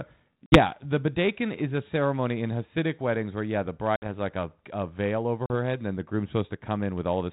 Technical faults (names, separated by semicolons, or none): packet loss on an ADPCM call